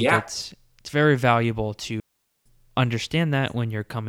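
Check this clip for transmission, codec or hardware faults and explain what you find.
There's one fault in the speech: a digital wireless dropout. Right after "it's it's very valuable", at 2.00 s, the receiver lost too much data and muted for about 460 ms until 2.46 s. You get a clean, near-silent hole with a quick fade and no noise burst on either side.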